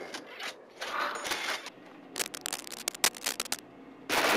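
From 2.16 to 3.59 s, dense, uneven scratching and rustling sits over the sound, roughly as loud as the sound itself. This is cable scratch noise, likely from a worn cable, connector or control being moved, its contact resistance fluctuating rapidly.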